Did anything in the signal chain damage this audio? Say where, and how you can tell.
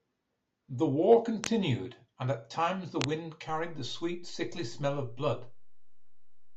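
Yes. A DC step at the converter or analogue input shifts the waveform's zero line by about -42 dBFS at 3.49 s, and the offset holds to the end of the clip. That jump is heard as a single low thump, while the speech continues unchanged.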